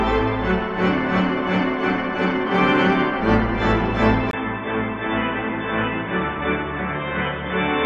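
At 4.31 s, after a 20 ms gap, the sound turns dull, slightly quieter and faintly noisier to the end, with nothing above 3.8 kHz: likely an input switched to a poorer device.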